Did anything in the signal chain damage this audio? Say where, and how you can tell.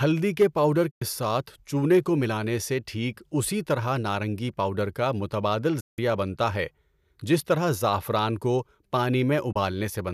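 Yes, two kinds of damage. Hard clipping hits early, from 0.41 to 0.45 s: a brief peak is driven about 4 dB past what a converter or gain stage could pass, so its top is sheared flat. The flat top adds a burst of high harmonics, heard as a short crackle on the loud moment. Codec artefacts or noise would smear across quiet passages too, but this distortion stays tied to that peak and vanishes below it.

The other fault is a digital broadcast dropout at reception, where the receiver lost lock or rejected corrupt frames and muted. It happens three times: 0.91 to 1.02 s (96 ms missing), 5.80 to 5.99 s just after "نارنگی پاؤڈر کا متبادل" (168 ms), and 9.52 to 9.56 s (24 ms). Each gap fades out and back in over about 8 ms, and the lengths are multiples of 24 ms, which fits whole lost frames. A damaged cable gives ragged, clicky breaks instead, and a network concealer would fill the gap rather than silence it.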